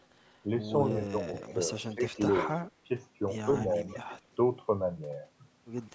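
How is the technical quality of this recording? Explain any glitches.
The recording has two kinds of call-path faults, both recurring. Echo leak appears at 0.00–0.38 s, 1.28–2.52 s and 3.46–4.19 s: a faint copy of the speech trails about 140 ms behind, weakest at first and strongest in the middle stretch. It is likely loudspeaker pickup that the far end's echo canceller failed to remove. Speech suppressed in double talk occurs at 0.92–1.33 s and 1.94–2.90 s, where the speech dips by up to about 20 dB in short bites, likely because the echo canceller mistook overlapping talk for echo and turned it down. The upper band stops at 8 kHz, as expected from call microphone processing.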